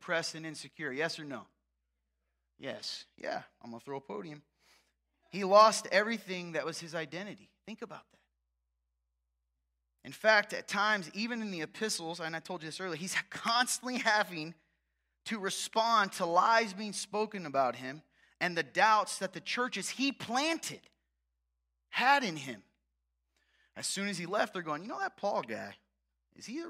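No technical faults can be heard anywhere in the recording; the signal stays steady and intact throughout.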